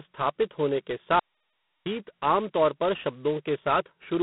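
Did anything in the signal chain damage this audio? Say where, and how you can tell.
Yes, at the codec stage: G.726 ADPCM, at what sounds like its 16 kbit/s rate, throughout. Speech carries a harsh, rasping hiss that swells with its level, because coarse prediction-error steps add level-tracking noise. A spectrogram shows energy confined to 150 Hz to 3.6 kHz, nothing above 3.9 kHz.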